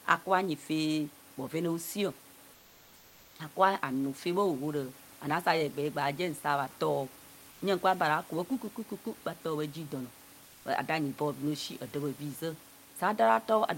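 At 2.53 to 3.39 s, 7.51 to 7.61 s and 10.45 to 10.65 s, comfort noise replaces the background. In each pause the room's detailed ambience drops to a flat, featureless hiss about 1 to 2 dB quieter, likely from Opus DTX.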